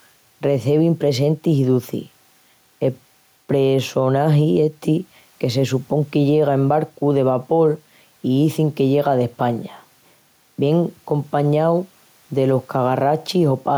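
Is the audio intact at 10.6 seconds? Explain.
No. At 10.6 seconds, as throughout the clip, there is gain pumping: with room noise sitting about 43 dB below the speech, the gain swings by roughly 5 dB, leaving the speech squashed and flat in level. The likely cause is microphone gain set far too high, with a fast limiter or compressor clamping down on every loud syllable and releasing in the gaps.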